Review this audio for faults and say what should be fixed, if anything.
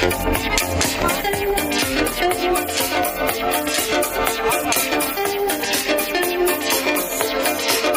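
Nothing to fix: no dropouts, glitches or other technical faults turn up anywhere in the clip.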